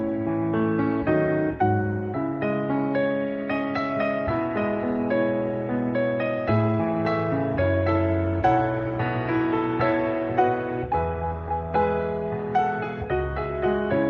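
No technical faults can be heard anywhere in this recording.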